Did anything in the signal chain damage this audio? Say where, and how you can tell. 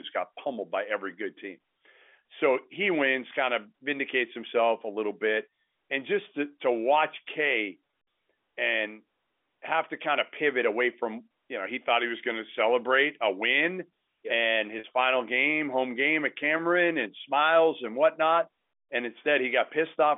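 Yes: packet loss with pitch repetition, a network fault, at 7.87 to 7.95 s and 14.79 to 14.84 s. In each, 50 ms of audio went missing (in runs of at most 20 ms in the first), and the receiver repeated the last pitch period, leaving a brief held, buzzy tone.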